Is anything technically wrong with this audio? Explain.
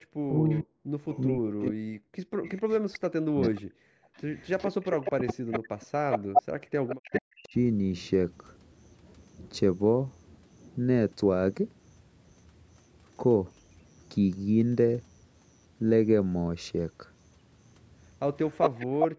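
Yes, the speech carries several echo-canceller faults.

Speech suppressed in double talk, from 0.0 to 5.6 s and again from 7.2 to 7.55 s. The voice dips very deeply, cutting out in pieces for about two seconds in all during the first stretch. This is likely an echo canceller mistaking overlapping talk for its own loudspeaker echo and turning everything down.

Echo leak, from 0.33 to 7.49 s and from 18.49 to 19.07 s. A delayed copy of the voice trails it by 443 ms, then by 406 ms. The copy sits about 10 dB below the speech at first and is about as loud as the speech near the end. The likely cause is a loudspeaker echo that the canceller failed to remove fully before sending the audio back.

Background gated by the echo canceller, from 0.96 to 2.43 s, 6.19 to 6.72 s, and 18.87 to 19.18 s. The room sound drops out by about 40 dB in brief holes of roughly a third of a second each. The canceller clamped the microphone hard while the loudspeaker played, then released it.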